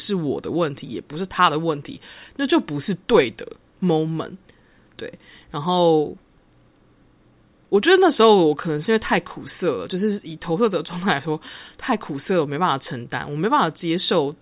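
Nothing in this recording trips any alarm, as there are no technical faults to point to at any moment.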